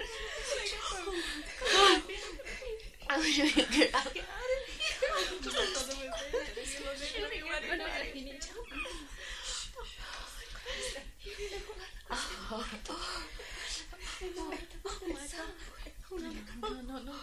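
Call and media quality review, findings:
Call and media quality review findings: no faults heard in this clip.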